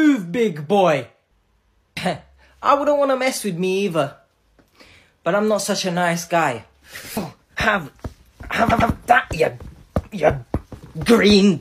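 At 8.69 s the audio stutters. This is a repeated-frames fault. A block of about 104.5 ms plays two extra times, so the same fraction of a second is heard three times in a row, ending at 8.90 s. The block length fits a short run of about four compressed frames written or sent more than once. The repeats add 209 ms to the audio.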